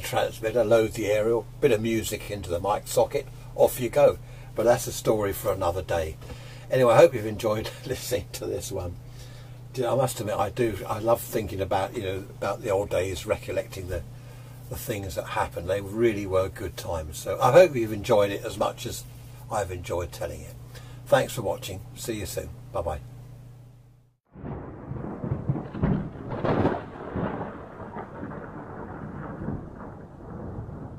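The audio has two stutters caused by repeated frames, where a short run of compressed frames was sent twice more and the decoder replayed the same slice. At 2.22 to 2.27 s a 16 ms block plays three times in all, adding 52 ms. At 19.14 to 19.33 s a 93 ms block repeats twice more, adding about 186 ms, which fits a run of four frames.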